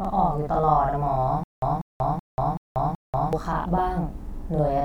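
Speech runs through the whole clip with a doubled quality, as if every syllable were spoken twice in quick succession at the same level. That is channel delay (doubling): one channel trails the other by about 46 ms, which fits a 2048-sample buffer, and when the two are summed to mono the late copy sounds as a separate slap rather than blending in. From 1.44 s to 3.33 s the speech stops moving forward and becomes a stutter with silent gaps. A burst of about 191 ms plays, then about 188 ms of dead digital silence follows, and the same burst returns, repeating five times at a steady 379 ms period. Whatever should have been heard in that span is missing. The likely cause is a stalled stream or player that replayed its last buffered fragment on each retry and then ran empty until the next attempt.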